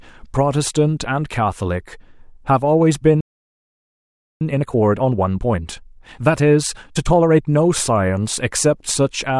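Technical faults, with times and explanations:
3.20 to 4.41 s, playback stall: the speech stops abruptly mid-flow and the output falls silent for about 1.2 s before resuming. The player likely ran short of buffered data or its audio thread was blocked, so nothing reached the output until it recovered.
4.41 to 7.41 s, time-compressed catch-up: right after the gap the speech runs hurried at about 1.25 times normal speed while keeping its pitch. Small segments are being cut and cross-faded out to shrink the backlog left by the stall.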